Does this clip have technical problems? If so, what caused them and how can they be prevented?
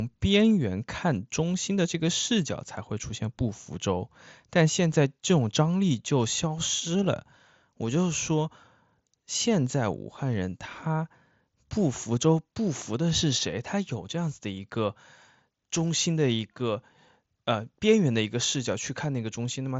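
No, this clip has no technical problems, so there is nothing whose cause needs tracing or preventing.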